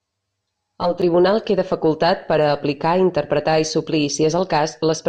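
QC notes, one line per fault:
0.00–1.02 s, channel delay (comb filtering): one channel of the speech runs roughly 10 ms behind the other, and when the two are folded to mono the shared content cancels at regularly spaced frequencies, the first notch sitting somewhere near 50 Hz and further ones repeating at about 100 Hz intervals up the spectrum. The fixed notches strip energy in a regular pattern, so the opening second sounds hollow and phasey, as if heard through a tube.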